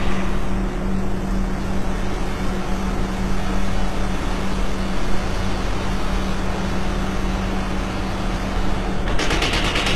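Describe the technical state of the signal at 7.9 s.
At 7.9 s the sound carries HE-AAC compression throughout, likely at a low bitrate near 16 kbps. Its treble is copied upward, so it rings gritty and metallic rather than dull, with nothing above 12.3 kHz.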